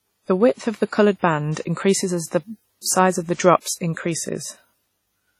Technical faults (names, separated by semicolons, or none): WMA compression